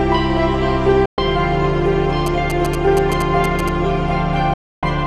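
At 1.06 s the sound drops out in a digital broadcast dropout. It fades to silence in about 3 ms and returns at 1.18 s. About 120 ms of programme is simply missing. That fits roughly five lost frames of 24 ms each. The receiver lost the signal or rejected corrupt frames, so it muted. Nothing sent in that gap can be recovered.

From 2.26 s to 3.69 s come GSM signalling bursts. They are heard as a galloping dit-dit-dit of short buzzes at 217 Hz. They sit about 10 dB below the programme. A nearby 2G phone was signalling to its network. The audio circuit rectified those radio bursts and turned them into sound.

A second, longer dropout starts at 4.54 s. Again the audio fades out within about 3 ms. It comes back at 4.83 s, after about 290 ms of silence. That points to around twelve lost frames. The content in that hole is gone.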